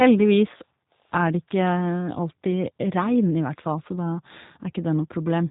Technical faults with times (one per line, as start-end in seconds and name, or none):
0.00-5.51 G.729 codec